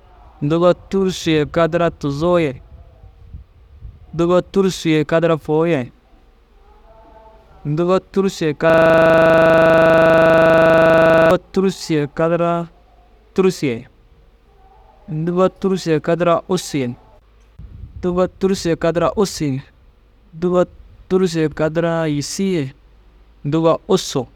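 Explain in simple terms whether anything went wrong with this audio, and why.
From 8.70 to 11.31 s there is a system hang loop. The computer froze. One 40 ms scrap of speech kept repeating, making a steady 25 Hz buzz.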